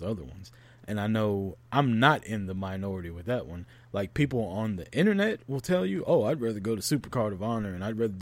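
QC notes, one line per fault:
5.96 s, dropped samples: a single sharp click lands right after "will tell", where the speech waveform jumps abruptly from one value to a later one instead of continuing smoothly. Only a tiny fraction of a millisecond of signal is missing, far too little to remove any audible sound, so nothing is heard as lost. The step discontinuity itself is what registers, as a brief broadband tick that would show as a thin vertical line across the spectrum. Likely a momentary glitch in the sample stream.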